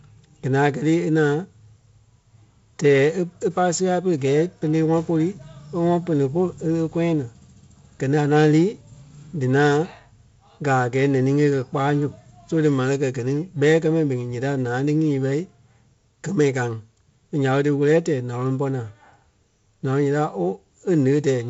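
Nothing's technically wrong with this speech clip, which has the typical G.722 wideband telephone coding sound, with nothing above about 7.7 kHz.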